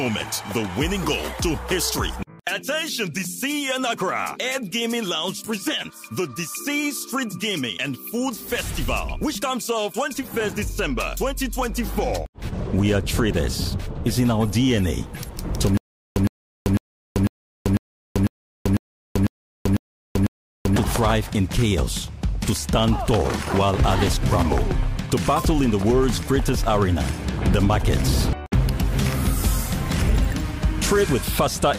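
From 15.77 to 20.76 s, a stutter with silent gaps: one 111 ms burst repeats every 499 ms, with digital silence between. Unlike random dropouts, the same fragment returns, likely from a stalled stream.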